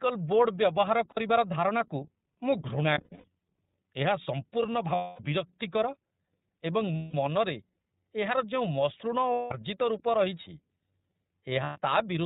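The speech sounds thin and slightly rough and synthetic from start to finish, with nothing above 4 kHz and a plainly audible coded quality. This is the iLBC codec, a narrowband VoIP coder that codes each frame's excitation independently of the frame before. Its character fits 30 ms frames at around 13.33 kbps, which trades some naturalness for frames that each decode on their own.

At 1.10 s, 2.94 s, 4.95 s, 6.96 s, 9.32 s and 11.63 s the sound turns into a held, slightly buzzy or breathy vowel-like tone, then snaps back to normal almost immediately. These are lost iLBC frames. The decoder fills each gap by repeating the last pitch cycle mixed with noise. The gaps run about 60 ms at 1.10 s, 240 ms at 4.95 s, 180 ms at 6.96 s and 9.32 s, and 120 ms at 11.63 s. At 2.94 s the dropouts are scattered over about 300 ms, the longest lasting about a tenth of a second.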